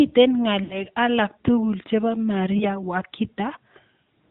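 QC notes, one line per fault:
throughout: AMR narrowband mobile codec. The speech sits in a phone-call band with nothing above 4 kHz, so it sounds boxy and dull, and the damage is plainly audible. The codec rebuilds the speech from a vocal tract model driven by sparse pulses, which gives it a buzzy, synthetic edge. The level of coarseness fits one of the middle AMR modes, around 10 kbps, rather than the top rate.
0.64–0.84 s and 2.58–2.66 s: lost AMR speech frames. The first gap sounds like three consecutive 20 ms frames dropped, about 60 ms of missing data. The decoder fills it by repeating the last good pitch and vocal tract settings at falling gain, so the sound smears and sags before recovering roughly. The second is a single lost frame, so you only get a short dip or warble.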